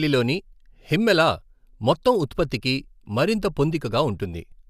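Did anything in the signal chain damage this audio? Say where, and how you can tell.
No, nothing in the chain from capture through to playback leaves an audible mark on this speech.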